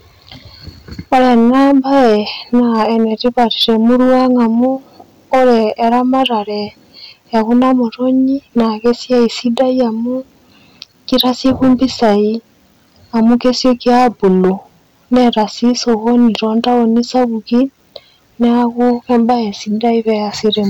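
Hard clipping runs through the whole speech clip. The signal is driven about 9 dB past what a stage can pass, so peaks are sliced flat. Around one sample in twenty is cut. The flat tops add high harmonics, heard as harsh fuzz on every loud syllable.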